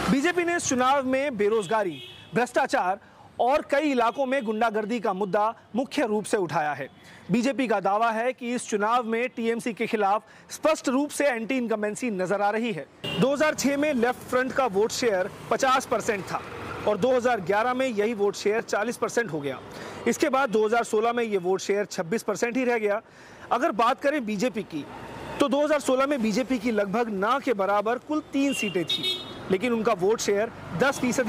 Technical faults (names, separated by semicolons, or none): lost LE Audio frames